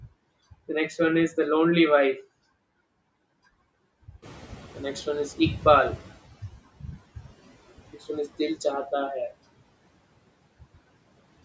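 From 4.22 to 6.32 s the noise suppressor is catching up: the room noise jumps, passes through with less reduction at first, then sinks smoothly over about 2.1 s, not pumping with the speech.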